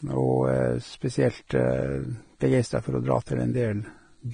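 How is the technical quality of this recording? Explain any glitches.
The technical quality is poor: heavy lossy coding damage runs through the whole recording. The most likely cause is Vorbis compression at a low rate, which fits roughly 24 kbps. The encoder draws a smooth spectral floor and quantises the detail on top so coarsely that fine treble turns into noise of similar energy. The speech sounds hissy and grainy, with roughened tones and smeared consonant onsets. A spectrogram shows nothing above 9.7 kHz and speckled, blotchy upper bands.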